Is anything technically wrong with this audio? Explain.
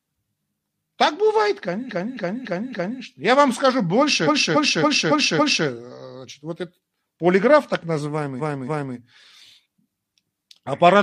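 Yes. The speech stutters three times from repeated frames: the same 0.28 s fragment replays back to back. It repeats four extra times from 1.86 to 2.98 s, five times after "вам скажу" from 4.23 to 5.62 s, and twice after "вот это полиграф так" from 8.36 to 8.92 s. The size of the repeated block fits a run of about six compressed frames that were written or sent more than once, so the decoder played them again and the clip grew longer by the repeated time.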